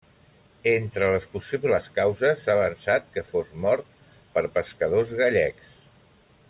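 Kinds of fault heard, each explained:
No technical faults can be heard anywhere in this speech recording.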